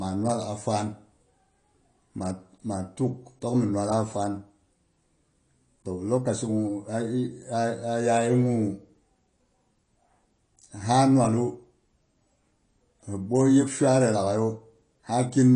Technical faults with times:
0.00-15.55 AAC compression

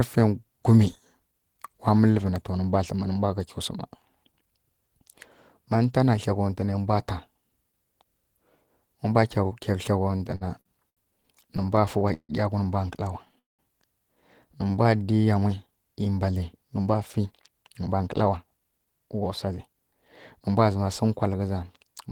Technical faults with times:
10.03-11.00 repeated stalls (stutter)
11.57-12.32 repeated stalls (stutter)
13.39-13.62 call audio freeze
14.64-15.12 jitter buffer slow-down
16.79-20.62 jitter buffer speed-up

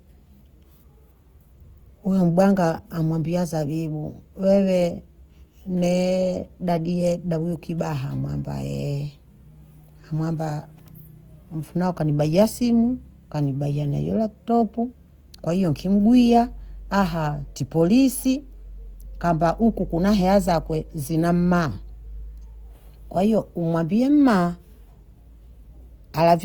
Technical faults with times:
0.00-26.44 Opus compression

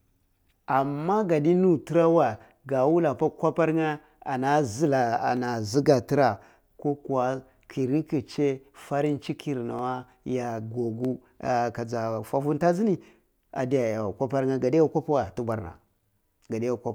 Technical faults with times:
5.37 dropped samples
9.79 dropped samples
11.05 dropped samples

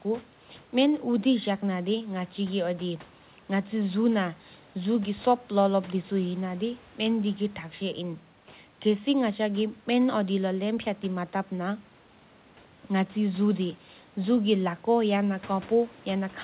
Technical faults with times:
none

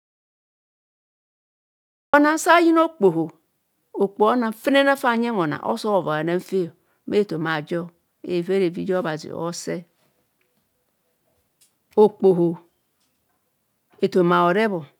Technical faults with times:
0.00-2.13 audio dropout to silence

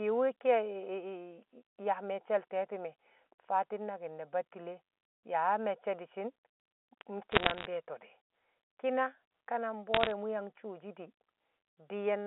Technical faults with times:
7.32-7.66 bit errors on a digital phone line
9.94-10.11 bit errors on a digital phone line

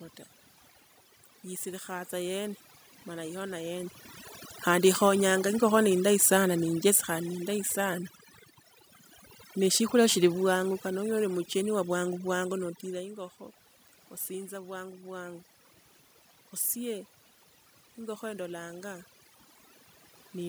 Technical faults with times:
0.00-20.48 overdone noise removal
5.59-8.07 automatic gain falling

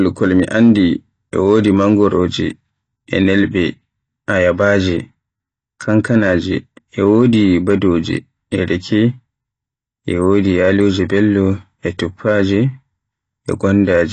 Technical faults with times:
0.00-14.12 AAC compression

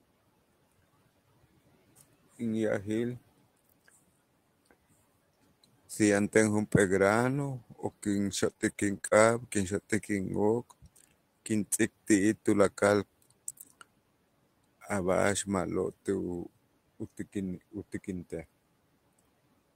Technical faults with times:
8.49-9.13 repeated packet loss (robotic sound)

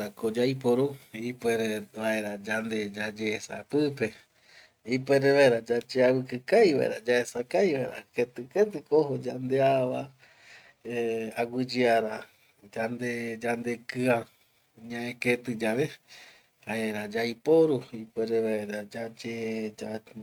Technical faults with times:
none

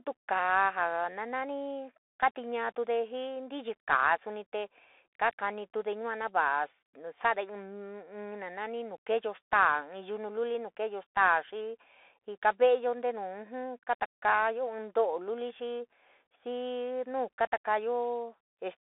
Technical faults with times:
0.00-18.80 Bluetooth CVSD headset codec

